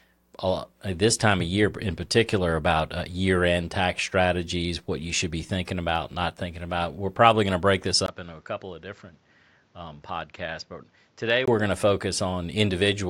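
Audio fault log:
8.06–11.48 s, input switched to a poorer device: after "going to break this" a 20 ms gap shows in the waveform, then speech comes back about 10 dB quieter and duller, with new noise roughly 30 dB down. The spectrogram is blank above 7.6 kHz, likely from a narrower-band microphone, until "going to".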